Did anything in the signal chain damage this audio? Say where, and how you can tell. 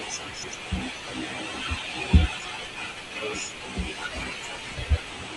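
Yes, frames out of order at 0.33–0.53 s, 1.58–1.78 s and 4.77–4.97 s, a network-stage fault. Each 0.2 s stretch of speech plays as a garbled flutter. Two adjacent blocks of about 96 ms arrived swapped and were decoded in that order, which fits runs of four codec frames. No time goes missing.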